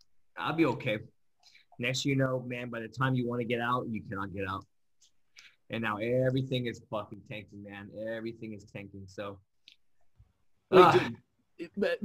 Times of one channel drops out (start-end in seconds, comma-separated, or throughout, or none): 2.26-2.97, 7.14-9.54